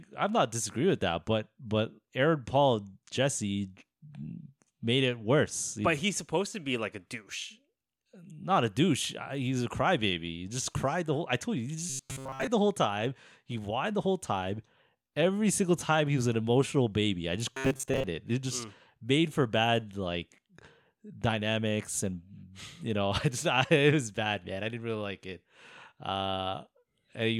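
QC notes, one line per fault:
11.90–12.47 s: robotic sound from repeated short buffers, after "I told you he", before "the whole time". Speech turns into a rigid, metallic 133 Hz buzz. This likely comes from replaying a 7.5 ms chunk in place of most new audio.
17.53–18.04 s: robotic sound from repeated short buffers, after "emotional baby I just". The same 133 Hz buzz returns. Most of the real audio is likely skipped while one short chunk repeats.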